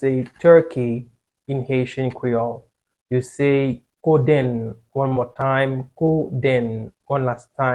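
From 5.08 to 5.52 s the sound turns choppy and robotic, from repeated packet loss: four gaps up to 30 ms, each patched by stretching the preceding sound.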